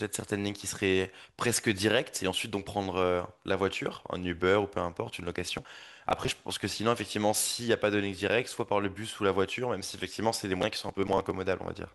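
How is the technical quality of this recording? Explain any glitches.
The recording has two bursts of processor overload crackle, from 5.36 to 6.36 s and from 10.61 to 11.31 s. The processor repeatedly missed deadlines for short buffers of roughly 10 ms and skipped them, which leaves dozens of tiny hard-edged gaps. The result is gritty tearing, unlike a single clean dropout.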